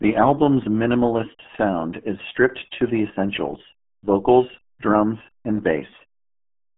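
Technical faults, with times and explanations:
Throughout: RealAudio 14.4 codec. The speech sounds muffled and gargly, with nothing above about 3.5 kHz. The band is squeezed to roughly 150 Hz to 3.4 kHz, like a telephone line. This heavy smearing fits an 8 kbit/s speech codec built for dial-up modems. At that rate the coder keeps only a coarse model of the voice each frame, so detail is thrown away and the rebuilt sound turns watery and blurred.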